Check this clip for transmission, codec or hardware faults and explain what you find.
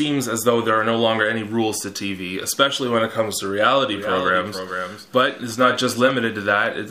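One fault is present, a doubled audio track, running from about 3.92 s to 6.10 s. Over that stretch a second copy of the sound trails the original by roughly half a second, about 10 dB quieter, full-band and dry, with no decay or room colour, and it switches on and off abruptly at those two times. The likely cause is the same signal being captured again through a slower path, or an edit leaving two copies out of alignment.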